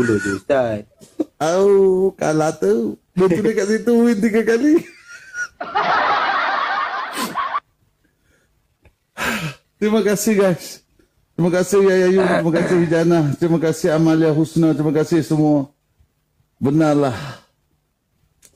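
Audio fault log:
Nothing wrong turns up anywhere in this one; the audio just runs along with no problems to flag.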